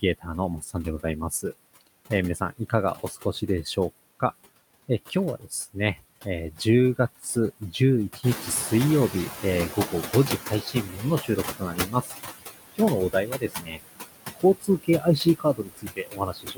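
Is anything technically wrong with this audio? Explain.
Yes. This speech clip has three kinds of noise-suppressor trouble.

Noise suppressor artifacts run through the whole clip. The suppressor pulls the room noise down by about 18 dB, deciding band by band and frame by frame, so the background dips in the gaps between words and swells back up beneath them. On a spectrogram the noise floor looks patchy and speckled, with isolated time-frequency islands instead of a smooth wash.

Speech cut by the noise suppressor happens in five stretches: 0.01–4.22 s, 4.88–8.42 s, 9.73–12.14 s, 12.75–13.81 s and 14.35–16.57 s. Here the suppressor mistakes parts of the speech for noise and attenuates them along with the background, by up to about 20, 15, 15, 17 and 21 dB respectively. In the first four stretches the affected portions add up to roughly 0.4 s, 0.4 s, 0.7 s and 0.5 s. Soft consonants and word endings sound swallowed or faint. 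The waveform shows syllable tails that collapse abruptly, and the spectrogram shows high-frequency consonant energy missing in places.

Noise suppressor catching up follows the room noise rising by about 10 dB at around 8 s. From 8.23 to 10.87 s the suppressor's noise estimate lags behind that rise, so the louder noise first comes through with too little reduction. It then sinks gradually over about 2.6 s until the cut settles near 12 dB. A spectrogram shows a brighter noise band just after 8.2 s that fades steadily toward 10.9 s, and the waveform's floor between words shrinks over the same span.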